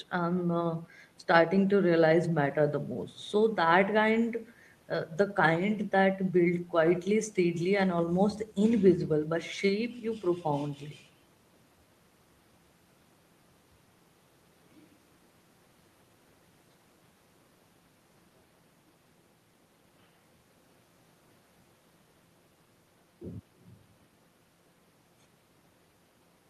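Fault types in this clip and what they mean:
No technical faults are audible anywhere in the speech.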